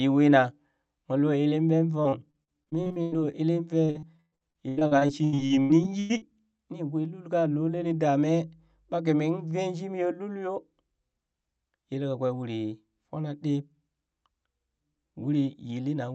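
Packets were lost or arrived too late again and again, and the receiver filled each hole by stretching the last sound. This repeated packet loss gives the speech a choppy, robotic quality. It spans 2.03 to 3.35 s, with 11 gaps up to 102 ms and about a quarter of the stretch concealed, and then 3.85 to 6.61 s, with 21 gaps up to 114 ms and about a third concealed.

From 7.37 to 8.99 s, power-line interference couples into the signal, likely through a ground loop or a nearby transformer. This mains hum is a steady low 50 Hz tone with some low harmonics, sitting faintly beneath the speech.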